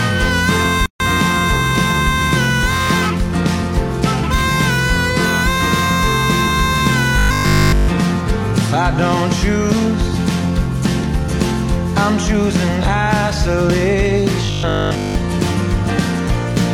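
At 0.86 s the sound stops dead and resumes at 1.00 s, a gap at a join of encoded pieces lasting about 142 ms. Two separately encoded sections were spliced without trimming the encoder's start-up delay and end padding, so that silence sits in the middle. The abrupt edges are smeared, and the sound resumes where it left off. That distinguishes it from a dropout, which loses material.

From 7.18 to 7.88 s, and again from 14.45 to 15.15 s, the sound turns into a rigid, metallic buzz at 50 Hz. This is robotic sound from repeated short buffers. A steady 50 Hz buzz fits a 20 ms chunk being replayed whenever fresh audio arrives late, which is the likely cause. In the first stretch the sound is held entirely on repeats. The second is mostly repeats. Unlike mains hum, the buzz appears only in these two stretches and still loosely follows the changes in the sound.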